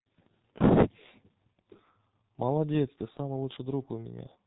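From start to finish this speech has been through a G.723.1 codec, and it's taken a heavy beating. That codec works in 30 ms frames and squeezes everything down to a trickle, here the sound fits roughly 6 kbit/s. Nothing above 4 kHz survives, so the whole thing sounds muffled, and because the voice model updates so slowly you get a hoarse, gritty quality with consonants smeared together.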